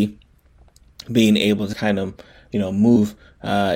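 Compressed frames skipped at 1.72 s and again from 2.95 to 2.97 s: whole blocks of the encoded stream never reached the output, so the speech jumps forward. The first gap drops around 70 ms and the second around 150 ms, which points to roughly three and seven frames of about 23 ms each. At each join the audio lurches ahead and the speech loses a short stretch outright.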